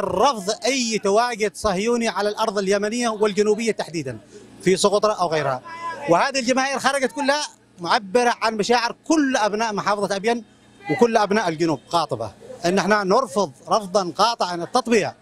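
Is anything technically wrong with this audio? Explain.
No, nothing technically wrong can be heard here; the signal stays steady and intact throughout, with no audible defects at any point.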